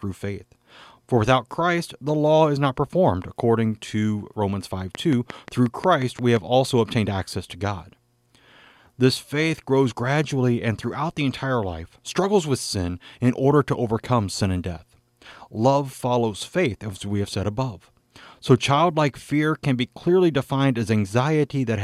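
A regular pulse source, likely electrical interference from nearby equipment or a faulty connection or power supply, injects a train of clicks into the speech from 4.95 to 6.38 s, ending just before "also obtained access to". About ten near-identical clicks arrive at an even 5.65 per second, each standing out at roughly 10 dB above the speech. They sound like a sharp, steady ticking laid over the sound, plainly audible in the gaps as well.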